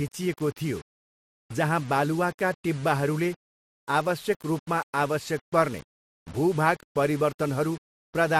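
From start to finish the speech carries a grainy, signal-following grit, with quiet tails sputtering or dropping out. That's low bit depth without dither, likely a coarse rounding, which fits around 6 bits, leaving error noise roughly 25 dB below the speech.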